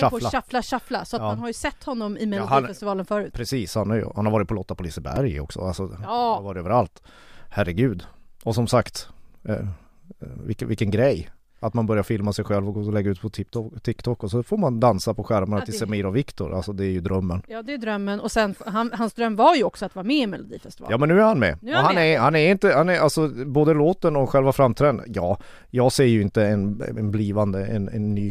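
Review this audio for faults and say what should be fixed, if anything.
At 5.16 s a repeated buffer occurs: a 2.9 ms piece, which fits a 128-sample buffer, plays three times, heard as a brief buzzy click with roughly 5 ms of audio missing. The waveform shows identical short cycles with hard steps at each join, and a spectrogram shows a thin broadband vertical stripe. A larger playback buffer or a higher-priority audio thread would keep new data arriving in time.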